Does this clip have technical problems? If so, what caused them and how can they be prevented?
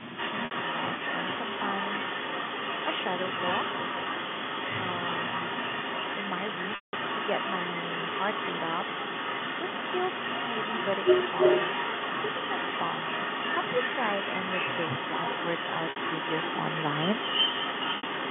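Yes. From 0.0 to 0.19 s the speech dips by about 20 dB. This is speech suppressed in double talk, likely from an echo canceller muting both talkers at once. Tuning the canceller's double-talk detector prevents it.

An echo leak runs through the whole clip. A copy of the speech returns about 322 ms late, at roughly the same level. A loudspeaker echo likely escaped cancellation. Using a headset or a better-converged echo canceller prevents it.

Packet loss with pitch repetition appears at 0.45, 6.75, 15.9 and 17.97 s. The 60 ms gaps sound briefly held and buzzy. The 180 ms gap at 6.75 s fades toward silence. A steadier network or a larger jitter buffer prevents it.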